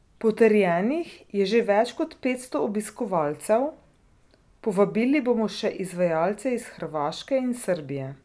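Speech recording with no audible technical faults anywhere.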